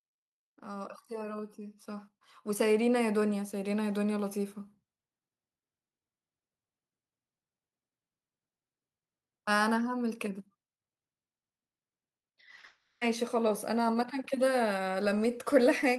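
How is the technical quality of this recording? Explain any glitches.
The recording has three audible problems: a slow level swell near the start and a burst of choppy, robotic sound running straight into a longer smeared-over gap just after 12 seconds.

From 0.62 to 4.46 s, the speech and the background noise grow louder together, by about 11 dB overall. This is automatic gain rising: the gain control judged the input too quiet and turned its gain up gradually rather than all at once.

Between 12.21 and 12.65 s, the speech turns choppy and robotic, with four short holes, the longest 40 ms, patched over. This is repeated packet loss: each missing piece was filled by extending the preceding sound, covering roughly a quarter of that stretch.

From 12.65 to 13.03 s, the choppy patch runs into 0.36 s of fading artificial buzz or hiss with no true silence, and the lost speech never returns. 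This is likely a long network dropout, where the receiver kept stretching the last sound until audio resumed.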